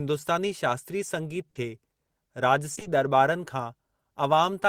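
Around 1.49 to 1.57 s there's a burst of packet loss. About 60 ms of audio never arrived, so the receiver stretched the last sound and let it fade for roughly that long. When playback picks up again, that stretch of the original is simply gone.

Then from 2.75 s you get short concealed packet loss three times back to back, at 2.75–2.79, 2.79–2.83 and 2.83–2.87 s. Each hole is about 20 ms, patched by continuing the previous sound and blending back in, so you hear a quick smeary wobble.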